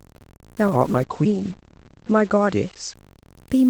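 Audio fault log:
throughout: low bit depth without dither. The speech grates with a grainy distortion that rises and falls with the voice, about 30 dB below it, and quiet tails sputter. This likely comes from truncating to 7 bits with no dither, so the rounding error tracks the signal.
0.68 to 3.01 s: call bitrate drop. The bandwidth estimate fell and the encoder went from 64 to 12 kbps, sitting at the bottom for 1.54 s. Coarser coding makes the speech rough and watery, and the top end narrows from 20 kHz to 8 kHz, so it turns muffled.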